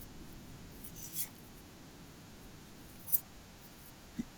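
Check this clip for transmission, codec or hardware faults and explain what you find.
No faults can be heard anywhere in the recording. The speech runs without any event worth reporting.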